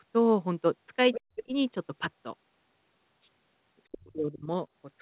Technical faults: other side's voice leaking through; speech suppressed in double talk

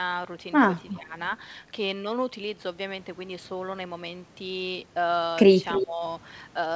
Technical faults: speech suppressed in double talk; echo leak

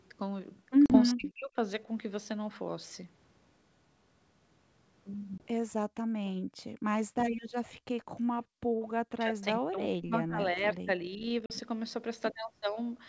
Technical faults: packet loss on an ADPCM call; speech suppressed in double talk; echo leak; background gated by the echo canceller

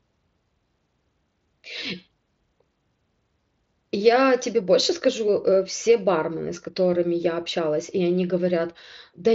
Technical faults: none

